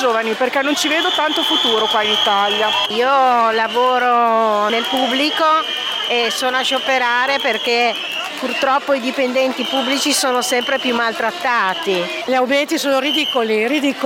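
No technical faults can be heard anywhere in the audio.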